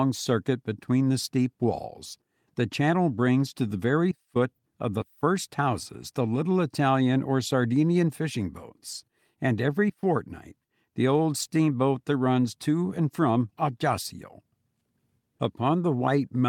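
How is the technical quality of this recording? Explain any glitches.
The recording has a persistent timing problem: the sender and receiver disagree about how fast time passes, and the receiver keeps patching the difference throughout the speech.

Clock drift between sender and receiver runs through the whole clip, with the sender's clock running roughly 4 percent faster. Because samples arrive a little quicker than the receiver plays them, its jitter buffer steadily fills and has to be trimmed. The drift isn't heard directly, but it drives the corrections below. On a waveform it would show only through the splice points they leave.

Repeated timing corrections run from about 0.02 s to 16.42 s, with the stream effectively running at 104 percent of the receiver's pace. To keep the buffer from overflowing, the receiver repeatedly cuts out short pieces of the speech, always removing and never repeating, at uneven intervals. 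Each cut is small, heard, if at all, as a slight hiccup or a slightly unsteady tempo. In the waveform they appear as abrupt joins where a cycle ends early. In a spectrogram they show as thin vertical discontinuities where the harmonics jump slightly.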